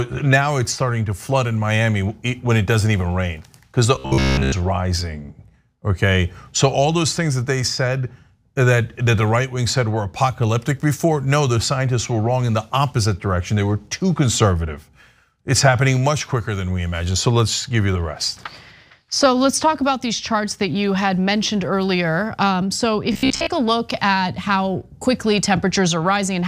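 At 3.95 s the sound turns robotic until 4.54 s. It happens again from 23.12 s to 23.47 s. Both times a rigid, metallic buzz at 66.8 Hz comes in. This is robotic sound from repeated short buffers. The likely cause is audio arriving too seldom, with a fragment of about 15 ms replayed to fill the gap. Most of each stretch is repeats, and the real audio underneath is skipped.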